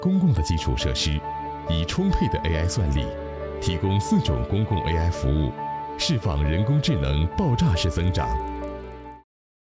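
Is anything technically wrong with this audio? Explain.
Yes. From 7.76 s to the end, there's a resampler restarted on every block problem. The 48 kHz to 16 kHz conversion seems to be running on each 40 ms chunk in isolation, so at every boundary the filter has no real neighbouring samples to work with and leaves a small glitch. Those glitches land 25 times a second, which comes across as a rough buzz riding on the sound, present only while there's signal.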